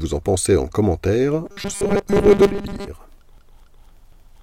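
From 1.46 to 2.89 s, speech turns into a rigid, metallic 200 Hz buzz: robotic sound from repeated short buffers, likely a 5 ms chunk repeating for most of that stretch.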